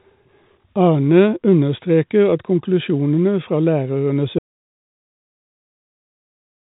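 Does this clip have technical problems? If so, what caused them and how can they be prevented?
Yes. At 0.62 s there is packet loss with the last packet repeated: about 20 ms went missing, which fits a single lost packet, and the receiver replayed the previous chunk. The repeat gives a small blip, seen as a repeated waveform segment. A larger jitter buffer with proper packet-loss concealment would prevent it.

From 4.39 s to the end there is an audio dropout to silence. The sound stops abruptly and is replaced by silence, a flat waveform line and a blank spectrogram with no room noise. The likely cause is a lost input, such as a disconnected device, failed link or accidental mute. Monitoring input levels and securing connections during recording would prevent it.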